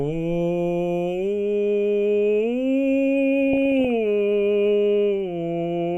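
From 3.53 to 3.87 s the music breaks into DAB burbling, a patch of short noise blips. Weak reception let bit errors, at a rate of perhaps a few tenths of a percent, slip past error correction into the MP2 data, so wrong samples put short blips of noise into single sub-bands, enough disruption to suggest about twenty damaged frames. Unlike a dropout, the programme never goes silent, and unlike steady low-bitrate swirl, the disturbance is short and jumpy.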